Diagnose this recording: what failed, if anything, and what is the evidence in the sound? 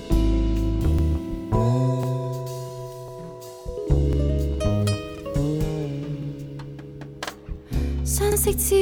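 A short stutter recurs about once a second, at 0.99, 2.03, 3.08, 4.13, 5.18, 6.23, 7.27 and 8.32 s. This is overlapping chunks at the buffer stage: 1-second blocks were joined with a 48 ms overlap, so that slice plays twice.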